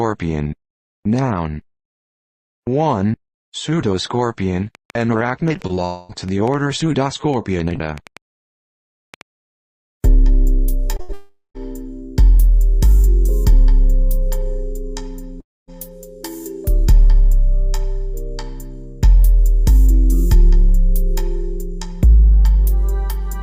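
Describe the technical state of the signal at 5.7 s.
At 5.7 s two faults overlap. A train of clicks runs from 4.75 to 9.22 s, with about 20 similar-shaped pulses arriving irregularly at roughly 4 per second. They peak at around the level of the surrounding audio, so they sit on top of the sound and stay audible in gaps. This points to a likely source of electrical interference or a faulty connection or power supply injecting impulses.

The instant itself falls inside a short concealed packet loss spanning 5.67 to 5.71 s, one of three in close succession (5.57–5.61, 5.67–5.71 and 5.75–5.79 s). Each gap is 20 ms of missing audio, which fits one lost 20 ms packet. The decoder bridged each gap by extending the preceding sound for roughly 16 to 21 ms before crossfading back. These three patches are heard as a rapid flutter or smear.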